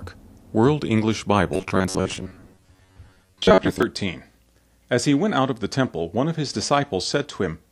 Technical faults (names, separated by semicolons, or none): robotic sound from repeated short buffers